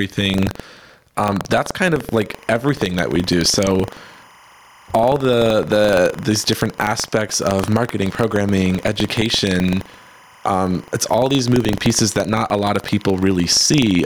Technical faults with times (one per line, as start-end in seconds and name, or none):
0.00-14.06 gain pumping
0.00-14.06 buffer tearing
2.15-14.06 timecode bleed